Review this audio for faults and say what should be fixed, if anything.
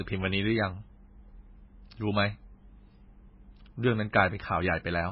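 Heavy MP3 compression likely runs through the whole speech clip, with nothing above 5.5 kHz and a watery, swirly texture that points to a starved bitrate near 16 kbps. Keep the source uncompressed, or encode at a far higher bitrate.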